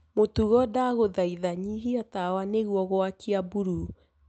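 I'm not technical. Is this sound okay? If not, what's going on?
Yes, this speech sounds fine, with nothing going wrong anywhere in it, and the only thing to notice is the narrower sound you'd expect from a normal internet call.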